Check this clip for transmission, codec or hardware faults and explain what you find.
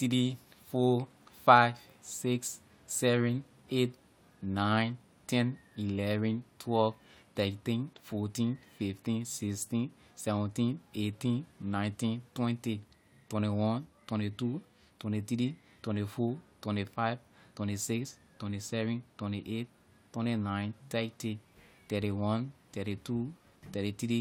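No transmission, codec or hardware faults can be heard in this speech recording, and the signal shows no dropouts, distortion or other technical disturbance.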